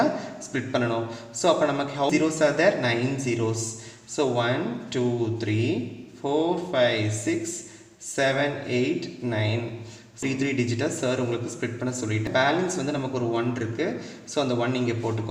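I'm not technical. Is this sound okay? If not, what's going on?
No. There are three very short blips, at 2.10, 10.22 and 12.27 seconds. This is damaged data in a compressed stream: bits of the stored file were wrong, so the player briefly misread the audio and had to find its place again.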